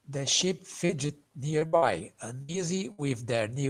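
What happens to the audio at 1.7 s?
Two bursts of packet loss hit here, from 1.67 to 1.75 s and 1.77 to 1.84 s. Each loses about 60 ms. The receiver stretches the last sound and fades it, leaving a held buzz or hiss. Just before, at 1.59 to 1.63 s, a short concealed packet loss patches a 20 ms gap, causing a brief smear.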